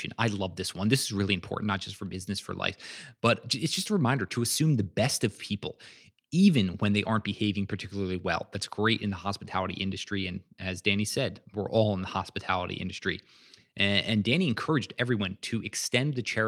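No technical faults can be heard in this recording.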